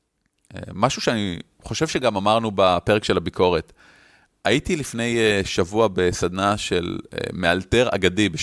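No technical fault can be heard anywhere in the speech recording. There is no point in the audio that calls for a timestamp or a closer listen.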